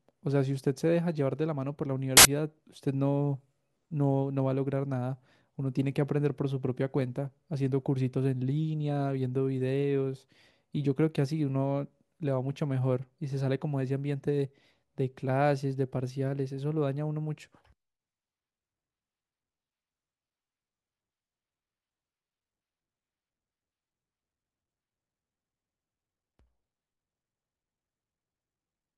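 Samples built from the wrong bytes, from 2.17 to 2.25 s: for about 80 ms the bytes of each sample are joined wrongly, so the rapidly changing low bits land in the high part of every value. This speech turns into a short burst of loud, harsh broadband noise.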